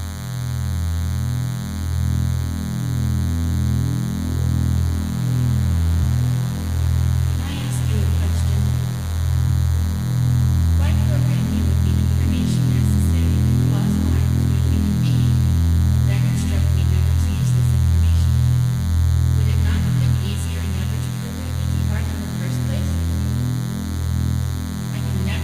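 A nearby DECT cordless phone or base station is sending a radio burst every 10 ms, and the audio circuitry is rectifying it, producing DECT cordless phone buzz throughout: a thin, steady 100 Hz buzz with many harmonics, roughly 20 dB below the audio. Damaged data in the compressed stream makes the decoder misread frames and lose sync while it hunts for the next frame header. This causes short chirps or blips at 6.00–6.04 s, 9.45–9.49 s and 17.39–17.43 s.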